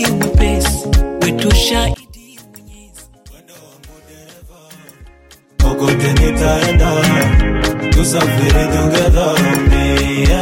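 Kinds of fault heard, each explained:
One channel inverted: From 1.94 to 5.60 s the sound drops by about 27 dB and turns faint. The likely cause is one stereo channel flipped in polarity. Summed to mono, the shared content cancels, leaving only the small difference between channels.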